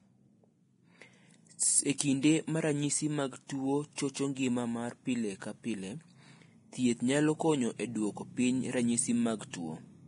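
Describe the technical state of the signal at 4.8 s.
At 4.8 s the speech sits inside heavy damage running the whole clip, likely Vorbis compression at a low bitrate around 30 kbps: nothing above 10.6 kHz, with grainy, hissy treble.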